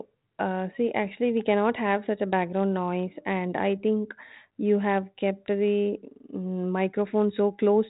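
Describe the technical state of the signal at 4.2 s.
At 4.2 s the speech is intact, with nothing wrong at that moment beyond the narrow telephone band and light grain of the 32 kbit/s G.726 ADPCM path it travels through.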